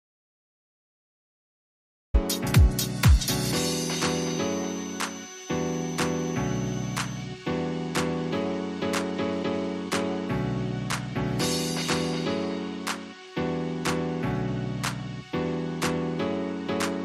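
From the first moment until 2.14 s there is an audio dropout to silence: flat silence with no room tone or hiss, unlike a quiet lead-in. The sound then starts abruptly mid-flow, likely as a lost input link returned.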